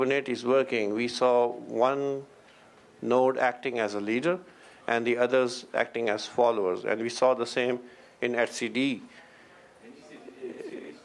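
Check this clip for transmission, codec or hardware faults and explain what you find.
No transmission, codec or hardware faults.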